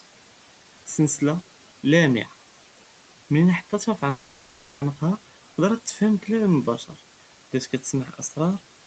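At 4.09 s, just after "מן חטתה פי", a call audio freeze sets in and lasts until 4.83 s. The last sound is stretched into a fading buzz for about 0.72 s. Packets were likely held up and the jitter buffer ran empty. The audio then resumes where it stopped, with nothing lost.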